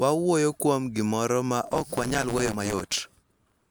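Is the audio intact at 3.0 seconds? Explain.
No. From 1.65 s, just after "kuom gimoro ma", to the end, a block size mismatch (truncated) drops each block's tail, consistent with 512-sample blocks written. Speech runs about 1.16 times fast at near-normal pitch over a 109 Hz buzz, seen as regular waveform breaks and steady harmonic lines on a spectrogram.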